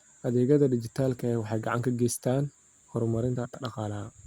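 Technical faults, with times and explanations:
3.35–3.55 s, frames out of order: two adjacent 93 ms blocks, consistent with four-frame runs, were decoded in swapped order, so this bit of speech plays with its halves exchanged, giving a garbled flutter and no lost time.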